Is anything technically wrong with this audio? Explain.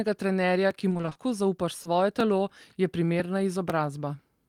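Yes. Three faults are audible.

Periodic USB or driver dropouts run from 0.21 s to the end, with one event every 0.50 s, about twice per second. A background process appears to be stalling the USB bus or audio driver at a fixed interval. Each time, a small piece of audio is skipped outright rather than padded with silence. The result is a regular train of small ticks, evenly spaced and audible wherever speech is present.

Repeated packet loss, heard as robotic sound, affects 0.89 s to 1.17 s. Packets kept arriving late or not at all across this stretch. The receiver patched each hole by extending the last received sound. None of the gaps exceeds about 20 ms, but together they account for roughly half of the span. With real and synthesised audio alternating this quickly, the speech turns choppy, with fragments missing.

Short concealed packet loss occurs at 1.83 s to 1.87 s. About 20 ms of audio failed to reach the decoder in time, and concealment filled the gap by continuing the preceding sound before blending back into the real signal. 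It is heard as a brief smear or wobble at that point, and a short consonant there may be lost.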